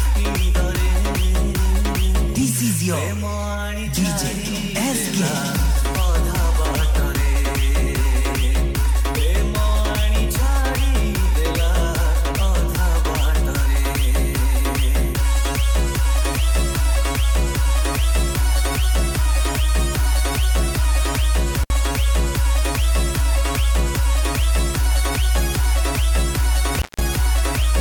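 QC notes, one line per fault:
21.64–21.70 s: intermittent contact. The signal drops out for about 55 ms. Crackle marks both edges, and faint hiss fills the gap. A loose cable or plug briefly lost contact, so the sound path opened and then closed again.
26.78–27.01 s: intermittent contact. The same kind of break, longer this time, with the line open for about 170 ms. Crackle again brackets the gap as the connection breaks and remakes, and faint hiss carries through.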